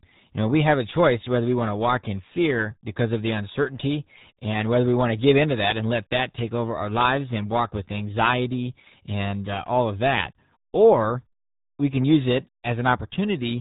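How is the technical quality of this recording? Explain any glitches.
Poor: the whole recording is heavily degraded. From start to finish the speech sounds muffled and gargly, with a watery, bubbling texture on every syllable and no brightness at all. Nothing reaches above about 3.8 kHz, so sibilants lose their edge. That is the RealAudio 14.4 codec, the old dial-up speech coder: it crushes the signal into very few bits, which fits an 8 kbit/s stream, discarding the upper band and rebuilding the rest only coarsely.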